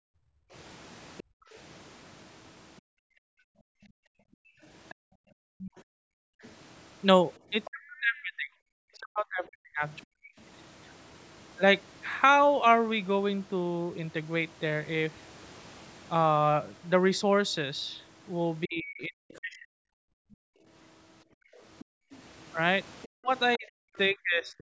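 From 0.0 to 7.41 s, the echo canceller clamps the microphone while the loudspeaker plays, so the background is gated. The room tone sinks by about 40 dB in patches totalling around four seconds, then returns each time the canceller lets go.

From 1.18 to 10.05 s, the other side's voice leaks through. This is likely echo the canceller failed to remove from the microphone. It sits roughly 20 dB under the talker as a second voice.

From 7.5 to 10.3 s, with both sides talking at once, speech is suppressed in double talk. This is likely because the canceller could not tell its own talker from the loudspeaker echo and turned both down. The voice drops by around 40 dB at worst, for about two seconds in all.

The same suppression hits again from 18.66 to 19.72 s, for about a second. The leak returns from 19.35 to 23.58 s, around 25 dB down. Background gating recurs from 20.0 to 22.11 s, taking out about a second and a half of room sound. 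Double-talk suppression strikes once more from 23.07 to 24.69 s, for roughly a second.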